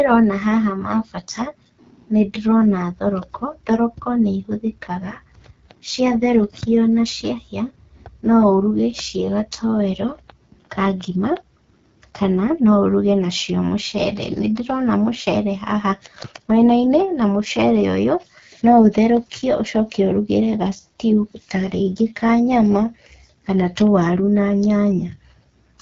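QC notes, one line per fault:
Throughout, AMR wideband (HD Voice) codec: the speech has a plainly rough, raspy grain, consistent with AMR-WB running at one of its lowest rates, around 8.85 kbit/s. Too few bits for the pulse-driven vocal tract model below 6.4 kHz, while the 6.4 to 7 kHz band is just shaped noise.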